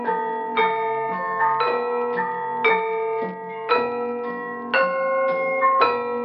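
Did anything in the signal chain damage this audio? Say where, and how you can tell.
No, nothing in the signal chain damaged this audio.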